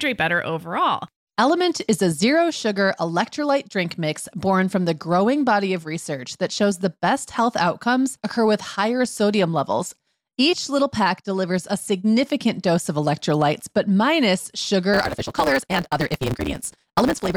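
Speech with a block size mismatch (truncated) from 14.93 s to the end, right after "of electrolytes but minus". The end of each block is discarded. A 138 Hz buzz appears. The speech runs 1.6 times fast at near-normal pitch, which fits 512-sample blocks being cut short.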